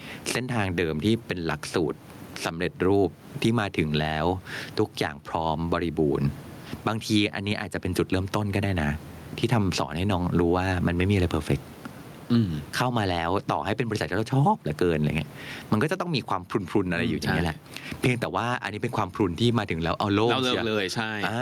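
All the way through, the speech has gain pumping: the level swings by around 20 dB, ducking each time a loud sound comes in, so loud and soft parts end up closer in level and the sound is squashed. It's likely the mic gain was set way too high, with a fast limiter clamping down on every loud syllable. The room noise sits about 35 dB under the speech.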